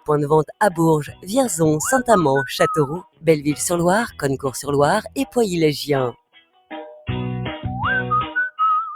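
Right from the start a noise suppressor applied to music or sounds is riding the level, swinging it by about 10 dB, so sustained parts pump and thin while attacks slip through. On top of that, there's sound cut by the noise suppressor at 0.45–0.79, 1.03–1.32, 2.87–3.28, 4.08–4.48, 5.01–5.37 and 6.11–6.73 s, where held sound sinks by about 13 to 20 dB.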